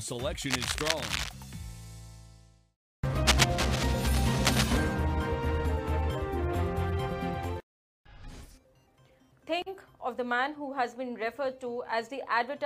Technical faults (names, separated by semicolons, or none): cable scratch noise